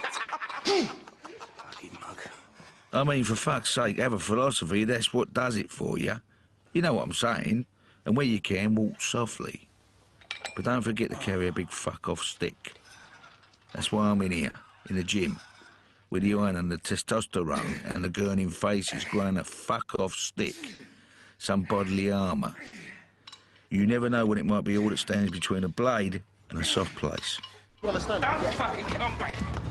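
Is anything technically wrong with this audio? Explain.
Yes. Clock drift between sender and receiver runs through the whole clip. The sender's clock is roughly 4% slow, so the receiver's buffer keeps draining and small timing hiccups recur unevenly.

Short stalls from late packets occur at 0.23–0.30 s, 14.50–14.56 s, 27.69–27.77 s and 29.29–29.35 s. Each time the buffer briefly ran empty. The last sound was held for 50, 40, 60 and 40 ms respectively, heard as a slight drawn-out buzz or dip with nothing lost.

Repeated timing corrections run from 1.21 s to 27.08 s. The receiver keeps repeating short pieces to match the slow sender, adding around 0.7 s in total. This plays at 97% speed, with a faintly unsteady tempo.

Scattered short gaps fall between 17.91 s and 22.75 s. About four late or lost packets were each patched by continuing the last sound, filling about 0.2 s in all, the longest near 70 ms. 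They come through as brief ticks or smears. The top end stops near 12 kHz, which fits the Opus call path this audio passed through.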